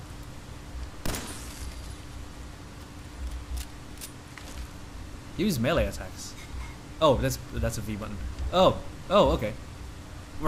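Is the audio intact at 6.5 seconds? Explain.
No. At 6.45 s a piece of roughly 30 ms is skipped, the two sides spliced directly. This is likely audio missing between chunks from 2.5 s chunking. The waveform shows an abrupt discontinuity; the spectrogram shows a vertical seam where patterns jump.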